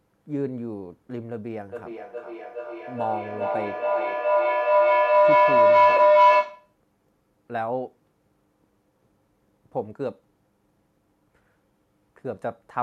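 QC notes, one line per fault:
1.71–6.78 s, feedback howl: mic-to-speaker loop gains level each trip, building a tone near 700 Hz, about 11 dB over speech, with the loop repeating every 0.4 s; bright horizontal spectrogram band.
5.97–6.00 s, AAC frame loss with concealment: about 20 ms missing, fitting two lost frames, refilled from the last good spectrum; a brief smeared patch, blurred vertically on the spectrogram.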